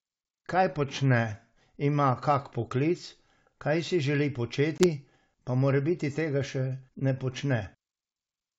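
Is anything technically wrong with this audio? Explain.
Yes. At 4.78 s the speech cuts to a hard-edged 20 ms silence, then returns slightly distorted until about 4.88 s. This is packet loss on an ADPCM call. About one packet went missing, and the decoder's predictor and step size drifted from the sender's until they resynchronised.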